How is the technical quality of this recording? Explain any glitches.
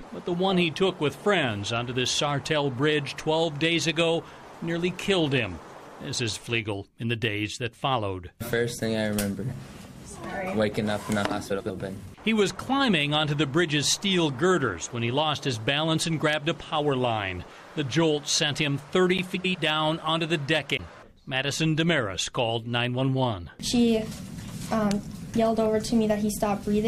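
The recording has two short glitches of the same kind: frames out of order, at 11.50 to 11.70 s and again at 19.35 to 19.55 s. In each, two adjacent runs of coded frames reached the decoder swapped and were played in that order, so a stretch of about 0.2 s plays with its two halves exchanged, each about 93 ms, which fits runs of four frames. It comes across as a brief garbled flutter, and no time goes missing.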